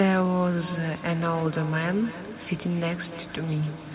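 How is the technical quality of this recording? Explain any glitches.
The quality is compromised by a feedback echo between two devices, running from 0.59 s to the end. Another device in the room replays this microphone's sound, which gets picked up again, so the speech returns roughly every 0.3 s, thinner and ringing, peaking at about 14 dB below the voice. The sound is also narrowband, with nothing above 4 kHz, which fits a G.711 telephone codec on the call path.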